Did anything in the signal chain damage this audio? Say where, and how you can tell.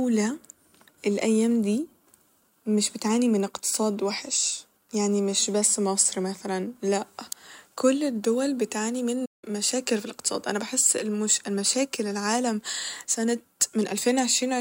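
Yes, at playback. Around 9.25 s the speech cuts off mid-flow and the output goes completely silent for about 0.17 s, resuming near 9.44 s. That is a playback stall, likely the player's buffer running dry or its output thread being blocked, starving the device of samples. On the waveform it shows as a flat near-silent gap with abrupt edges. On a spectrogram it is a blank vertical band spanning all frequencies.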